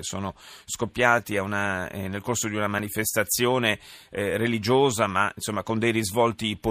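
At 2.79 s there's a tiny repeated buffer glitch in the speech. The next block of audio didn't get to the output in time, so the device replayed the block it had just played, once more. That block is only 2.67 ms long, which fits a 128-sample buffer, so it doesn't come across as a stutter. You hear a quick click from the hard join where the same few milliseconds are played twice, and roughly 3 ms of real audio gets skipped.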